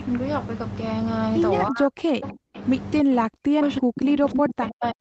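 It's a speech clip, and from about 3.03 s right through to the end the voice sinks and breaks up, dropping by something like 40 dB at its deepest. That's speech suppressed in double talk, likely an echo canceller that mistook the talker for loudspeaker echo while the far side was talking and pulled everything down. The audio stops at 8 kHz throughout, which fits an Opus call path at around 24 kbps.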